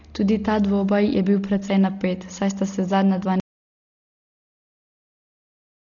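A speech recording carries heavy codec damage from start to finish. Nothing is present above about 7.1 kHz, so the sound is dull and boxed in. Tonal parts of the voice have a rough, fluttering noise around them. This points to Dolby Digital compression, likely at a low rate that fits a 32 kbps stream. Starved of bits, the encoder has cut the top of the band and left many frequency lines without detail, and the decoder fills those lines with noise. At 3.4 s, right after "sta se zadnja dva", there is an audio dropout to silence. The sound stops abruptly mid-flow and never returns. The rest of the clip is silence with no room tone at all. Whatever was said after that point is lost. The input was likely cut off, through a lost link, a disconnected device or a mute, while recording carried on writing silence.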